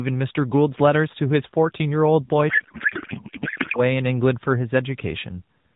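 From 2.50 to 3.81 s there's a codec payload misread: octet-aligned AMR frames get parsed as bandwidth-efficient, so the speech turns into garbled, warbly noise that barely tracks it.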